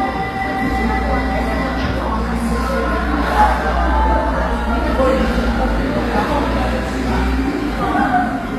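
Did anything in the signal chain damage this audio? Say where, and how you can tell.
Yes. Throughout the clip the treble sounds gritty and metallic, bright yet not matching the lower spectrum, with nothing above 14.9 kHz. This is likely HE-AAC compression at a low bitrate, around 24 kbps, where the codec rebuilds the top band from copied lower bands.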